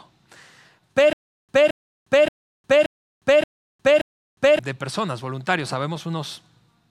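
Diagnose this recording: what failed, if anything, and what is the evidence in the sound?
The playback or stream buffer likely stalled between 1.13 and 4.59 s, replaying its last fragment at each retry. That produces a stutter with silent gaps: a 0.22 s burst of speech repeats six times, separated by 0.36 s of dead silence, every 0.58 s. The speech due in that span is lost.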